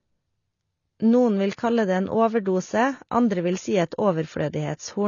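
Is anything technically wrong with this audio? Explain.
Yes, the speech has two faults.

AAC compression runs throughout. It sounds like low-bitrate coding, likely AAC-LC at around 24 kbps. Nothing above 6.9 kHz survives, because the encoder drops the top band to save bits. The result is plainly audible damage: dull, smeared speech with a fizzy edge on sibilants.

Pre-echo occurs at 1.56 s, just before "kalle det en". The transform block spreads its quantisation noise evenly, so noise meant for the onset leaks about 19 ms ahead of it. A brief hiss precedes the attack, which sounds softened.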